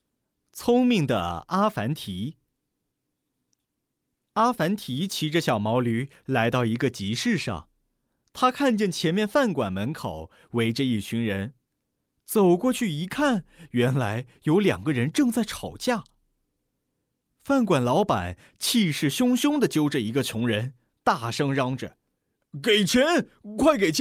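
The speech recording contains no audible technical faults. Nothing in the signal path draws attention to itself at any point.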